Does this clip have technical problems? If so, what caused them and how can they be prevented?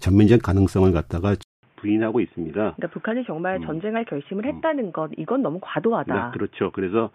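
Yes. At 1.43 s the speech goes silent for 200 ms, then returns about 10 dB quieter and dull, with nothing above 3.6 kHz through to the end. A new noise floor appears, some 40 dB below the speech. This points to an input switched to a poorer device, likely a narrowband headset or microphone. A spectrogram shows a sharp ceiling at 3.6 kHz after the gap, and the waveform drops in height. Locking the input device before recording prevents this.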